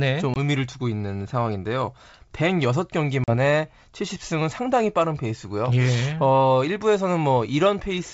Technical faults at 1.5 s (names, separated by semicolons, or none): none